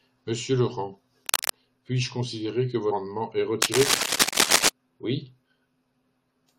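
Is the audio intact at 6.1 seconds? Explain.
Yes, the speech at 6.1 seconds comes through intact, with no dropout, click, distortion or other technical fault at that moment.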